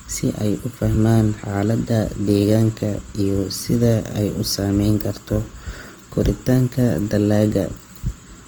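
Throughout the speech, Opus compression likely roughens tones into grainy noise. Detail reaches about 20.1 kHz, yet damage stays plain, which fits a low rate near 24 kbps.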